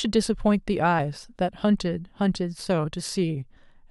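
At 0.98 s and again at 3.56 s the speech is broken by a brief glitch, each lasting under 20 ms. These are damaged data in a compressed stream: bytes in the encoded file were corrupted, so the decoder misread those frames, lost sync and hunted for the next valid frame header.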